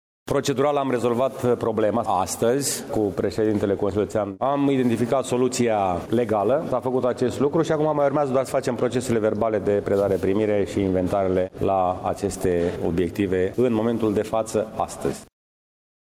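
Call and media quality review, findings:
Gain pumping throughout: level swing around 15 dB; dynamics squashed. Likely input gain far too high, fast limiter clamping every peak. Unlike a noise gate, pumping does not cut the background out.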